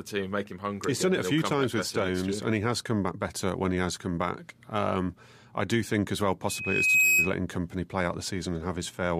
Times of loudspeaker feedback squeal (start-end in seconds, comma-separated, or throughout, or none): 6.49-7.34